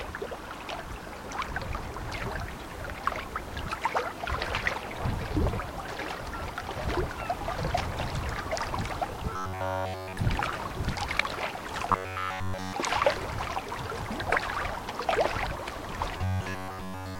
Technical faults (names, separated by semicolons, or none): robotic sound from repeated short buffers